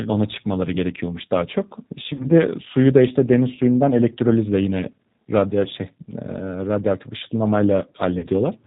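Throughout, the speech carries G.729 codec damage: nothing above 4 kHz, with a rough, synthetic edge that points to an 8 kbit/s model-based coder rather than mere band-limiting. At 2.13 to 2.27 s, VoIP packet loss concealed by the speech codec stretches the last sound into a fading buzzy tone or coloured noise, filling a 60 ms loss that fits three packets. At 8.19 to 8.27 s, a 40 ms loss does the same. Unlike a dropout, there is no silence, and the voice stays weak or distorted after the gap.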